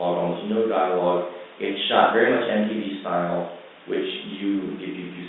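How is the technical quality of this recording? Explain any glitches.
Nothing stood out on listening to this speech recording.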